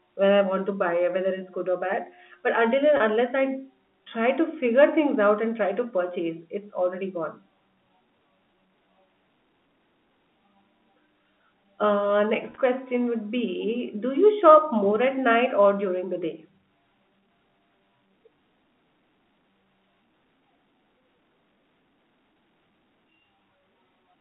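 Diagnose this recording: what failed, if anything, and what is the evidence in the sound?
Network packet loss with pitch repetition: dropouts at 2.97 s (30 ms), 10.79 s (10 ms) and 12.5–12.58 s (60 ms, scattered) are concealed by repeated pitch periods, heard as brief buzzy holds.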